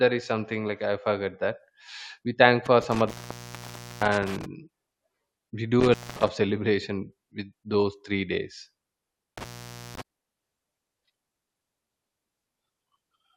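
Intermittent contact breaks the speech three times: from 2.66 to 4.46 s, just after "we thank"; from 5.80 to 6.29 s; and from 9.38 to 10.01 s. A loose plug or cable connection opens briefly, so the signal drops out for about 0.92 s, 0.23 s and 0.51 s respectively. Each gap is framed by crackle as the contact scrapes open and shut, leaving faint hiss while the line is broken.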